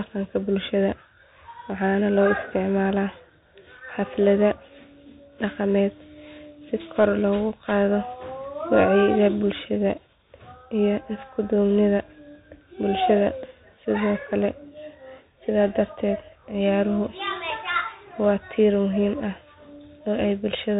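Bluetooth CVSD headset codec damage runs throughout this speech clip. Nothing passes above 3.8 kHz, and the one-bit slope coding's adaptive steps leave scratchy sibilants and granular hiss.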